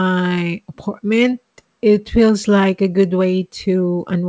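No faults detected; the speech carries the expected wideband call-codec character with nothing above 8 kHz, consistent with G.722 on the call path.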